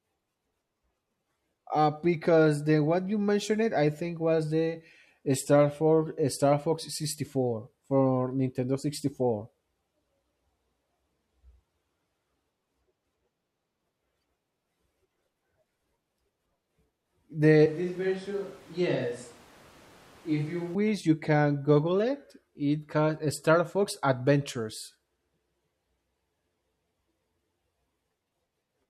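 From 17.66 s to 20.75 s the speech abruptly turns roomy and hollow, thinner in the bass and about 10 dB quieter, with background noise rising to only some 25 dB below the voice. This is a switch to a distant microphone, likely because the close microphone dropped out. It snaps back just before "you can". On the waveform the envelope steps down; the spectrogram shows faded low frequencies, smeared reverberant tails and a raised noise floor.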